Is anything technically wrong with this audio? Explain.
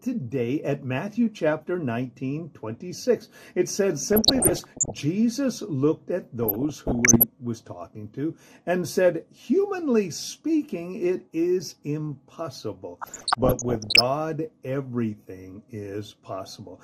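Yes. Throughout, the audio is dull with gurgling granular distortion, likely MP2 compression at a low rate near 80 kbps: coarsely quantised sub-bands, with upper bands flickering out as gaps on a spectrogram. DAB burbling appears from 4.01 to 5.02 s, 6.43 to 7.23 s and 13.01 to 14.01 s. Bit errors of roughly 0.7 to 1 percent corrupt sub-band data, producing short noise blips in single sub-bands that show as isolated blocks jumping in level on the spectrogram.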